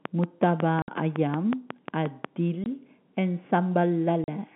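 A speech recording carried over a telephone-band line has two faults. From 0.05 to 2.26 s there is a train of clicks. The ticks come at a regular pace of about 5.5 per second, roughly fifteen in all. They peak at about 15 dB above the speech and are heard in the pauses too. Their closely matching shape and steady rhythm most likely point to interference from nearby equipment or a faulty connection or power supply. The second fault is packet loss filled with silence. The speech drops out to dead silence at 0.82 to 0.88 s for 60 ms, at 2.64 to 2.66 s for 20 ms, and at 4.24 to 4.28 s for 40 ms. Each gap has hard edges. All three lengths are multiples of 20 ms, which fits lost 20 ms packets. The receiver played nothing in their place. The speech itself stays within the narrow band of a G.711 telephone coding path, with nothing above 4 kHz.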